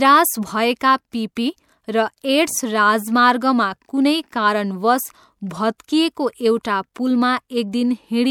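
Speech with pre-echo at 1.35 s, just before "र एड्स", and at 5.78, 6.63 and 6.94 s: short hiss smeared 13–17 ms ahead of sharp attacks by block-based transform coding.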